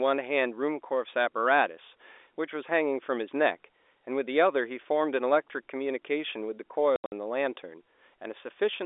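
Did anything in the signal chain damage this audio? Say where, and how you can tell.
Yes. Network packet loss filled with silence: from 6.96 to 7.12 s the speech breaks into hard-edged holes, the longest 80 ms, which suggests 20 ms packets.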